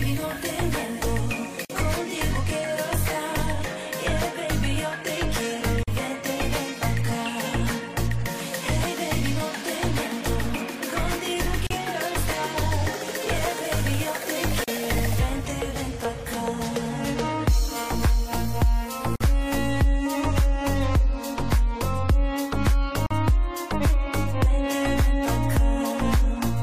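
Short dropouts of about 38 to 49 ms open at 1.65, 5.83, 11.67, 14.64, 19.16 and 23.06 s: gaps at joins of encoded pieces. Untrimmed encoder delay and end padding left silence at each join, heard as a smeared break before the sound resumes.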